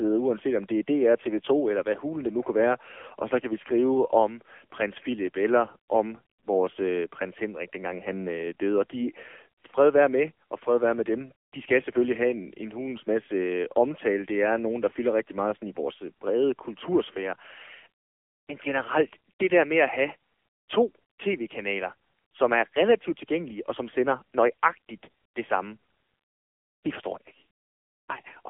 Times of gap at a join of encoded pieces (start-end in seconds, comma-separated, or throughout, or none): none